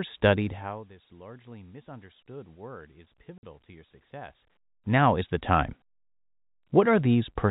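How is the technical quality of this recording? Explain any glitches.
The recording has one clear glitch: a brief dropout in the middle, heard through a telephone-band channel that stops at 4 kHz.

At 3.38 s, right after "largely misunderstood word is" and just before "to your", there is packet loss filled with silence. For 50 ms the audio simply vanishes. The receiver had nothing for that stretch and played silence in its place, and the gap length points to five 10 ms packets going missing together. Because the sound is cut off and resumes abruptly rather than fading, both edges are hard. On a waveform this appears as a flat notch with vertical walls. On a spectrogram it shows as a thin, fully blank vertical stripe.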